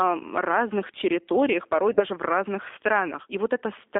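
The whole clip has been through the G.729 codec at 8 kbit/s, so the speech sounds rough and a bit synthetic, squeezed into roughly 250 Hz to 3.6 kHz. At 1.94 to 2.03 s, right after "разных территориях порой" and before "в разных", there's VoIP packet loss concealed by the speech codec. About 30 ms goes missing, which fits a single lost packet, and the decoder fills it by stretching the last sound and fading it out, and the voice stays weak or distorted as it recovers.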